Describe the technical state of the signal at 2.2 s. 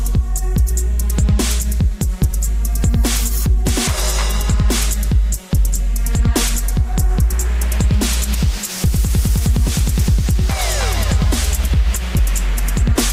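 At 2.2 s the audio is intact, with no audible fault at that moment.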